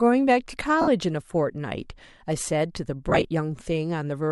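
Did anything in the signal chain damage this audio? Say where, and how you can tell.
Yes. Lost LE Audio frames at 0.81–0.88 s and scattered over 3.09–3.25 s: across the Bluetooth link, the LC3 decoder refilled gaps with sign-scrambled repeated spectrum, smearing speech into noise.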